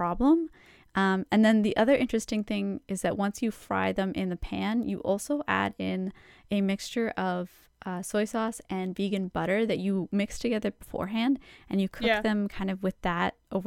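No technical faults are audible.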